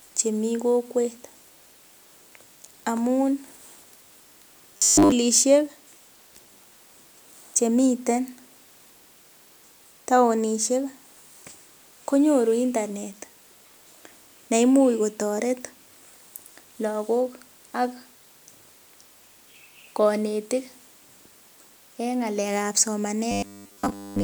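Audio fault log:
4.77–5.13 s and 23.31–24.23 s, robotic sound from repeated short buffers: the speech collapses into a rigid metallic buzz at 100 Hz that still loosely tracks the syllables, likely from 10 ms chunks being replayed in place of most of the real audio.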